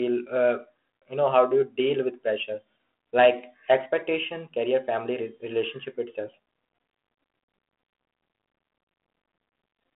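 No technical faults are audible.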